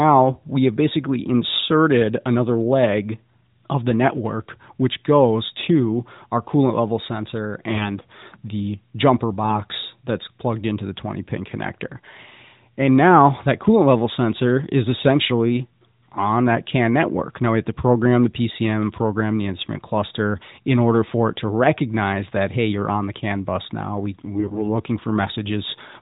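From 24.24 to 24.62 s the speech goes hoarse and gargly at steady pitch: AMR bit errors, a few percent of weakly protected bits flipped.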